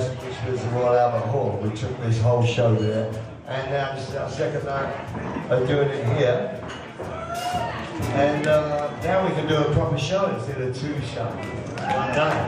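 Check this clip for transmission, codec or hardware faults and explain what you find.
Nothing here points to a transmission, codec or hardware problem, so there's nothing to flag.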